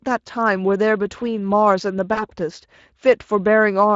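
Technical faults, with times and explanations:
Throughout: Speex codec. The CELP coder has too few bits for the excitation, which fits a bitrate of around 20 kbps, so the speech comes out plainly hoarse and noisy, with a grainy, buzzy edge in place of clean harmonic detail.
2.13–2.26 s: VoIP packet loss concealed by the speech codec. About 40 ms of audio went missing, which fits two lost 20 ms frames. The decoder filled the gap by extending its last pitch and filter with falling gain, giving a brief stretched stretch of buzzy tone or coloured noise that fades before the speech recovers.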